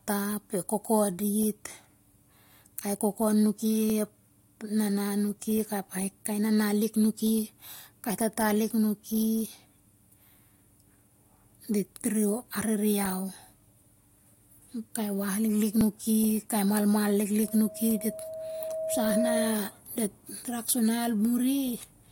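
A speech clip with small clicks or skips at 1.9, 3.9, 7.87, 11.85 and 15.81 s, each landing on a multiple of 2 s. This is overlap between stream segments: neighbouring 2-second segments claim overlapping time, and the player trims roughly 5 to 17 ms of real audio, so the waveform jumps. From 17.42 to 19.79 s a steady 640 Hz tone swells over about two seconds until it is roughly as loud as the speech. That is loudspeaker feedback squeal, where the microphone re-captures its own loudspeaker and the loop gain tops unity at that frequency.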